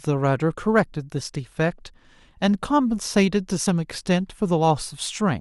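At 0.57 s the speech lurches forward, as if a sliver of sound had been snipped out. This is compressed frames skipped. A short run of encoded frames never reached the output, either lost from the file or discarded by the decoder as corrupt. The gap of roughly 30 ms fits about three 10 ms frames.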